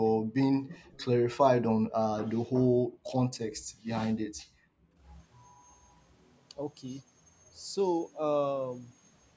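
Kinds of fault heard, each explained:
Background gated by the echo canceller: the canceller clamped the microphone while the loudspeaker played, dropping room sound by about 40 dB at 0.21, 1.8, 2.6, 3.48 and 4.26 s, for a tenth to most of a second. The waveform's noise floor vanishes, leaving dark vertical gaps on a spectrogram.
Echo leak: from 0.92 to 1.05 s a faint copy of the speech, roughly 30 dB down, trails 393 ms behind the original, likely residue the far side's echo canceller let through. A spectrogram shows a weak repeat of the harmonic pattern shifted later.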